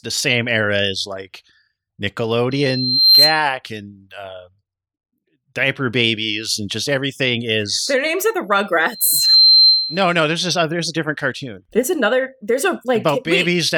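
A microphone is picking up the loudspeaker it feeds, and at about 4.1 kHz the loop gain rises above one, producing loudspeaker feedback squeal twice in this speech. From 2.51 to 3.45 s a thin tone swells over most of a second to about 10 dB above the speech before cutting off ahead of "and uh". From 8.92 to 10.16 s, after "their names are the", the same pitch builds faster, in under half a second, and holds until "there's this uh there's".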